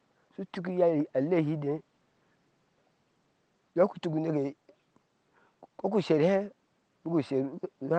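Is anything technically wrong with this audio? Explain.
No, nothing in this speech recording is technically wrong. Faint room noise sits about 44 dB below the speech, and the high end stops around 12 kHz, which fits the normal band limit of an Opus call link at a modest bitrate.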